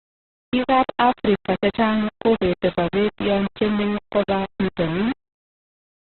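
Low bit depth without dither runs through the whole clip. The speech has a coarse, grainy distortion that shifts with every syllable and sits only about 10 dB below the voice. It is likely caused by rounding the samples to very few levels, about what 4 bits would give, with no dither to break up the error. The error tracks the signal, so softer passages turn gritty and the quietest moments sputter between steps or fall to silence.

Opus compression damage is also present from start to finish. The sound is cut off sharply at 4.1 kHz, which gives a narrowband, muffled quality, and the remaining spectrum is rough and noisy rather than clean. This points to Opus at a very low rate, around 12 kbps, likely in its music-oriented CELT mode. That mode keeps each band's energy but fills starved bands with noise or folded copies of lower bands, which is where the heavy rough graininess comes from.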